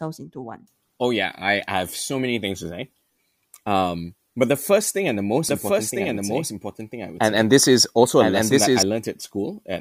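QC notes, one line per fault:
5.49–8.83 s, doubled audio track: a second, full-band copy of the speech runs roughly a second behind the original at about 5 dB lower, switching on and off abruptly at the range edges. It most likely comes from the audio being picked up again through a slower path or from two copies left misaligned in an edit. It differs from echo or reverb because there is one clean repeat with no decay tail and no room colouration.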